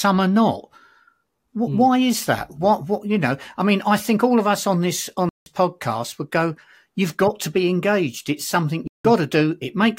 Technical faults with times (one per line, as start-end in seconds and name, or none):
5.29-5.46 block of digital silence
8.87-9.05 block of digital silence